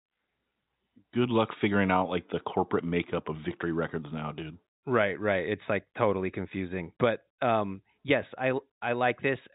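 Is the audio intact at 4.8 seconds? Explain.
Yes, at 4.8 seconds the speech is intact, with no fault at that moment.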